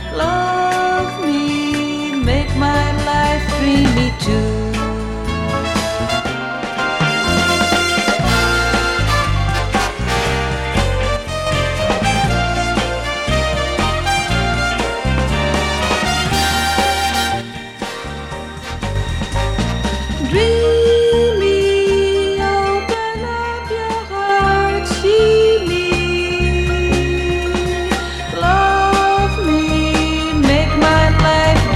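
At 6.20–6.78 s, 11.17–11.47 s, 17.41–18.96 s and 22.94–24.29 s the sound sags abruptly by about 6 dB, then snaps back. That's likely one channel drops out, each time briefly losing one stereo side before the mono sum.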